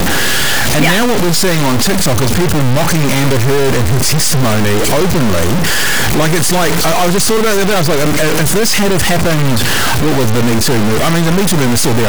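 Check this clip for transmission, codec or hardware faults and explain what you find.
One fault is present throughout the speech: a harsh, buzzy distortion, likely a stuck bit. A high-order bit held fixed offsets about half the samples by a large step, filling pauses with loud noise.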